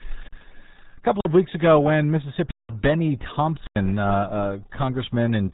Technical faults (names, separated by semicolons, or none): RealAudio 14.4 codec; block of digital silence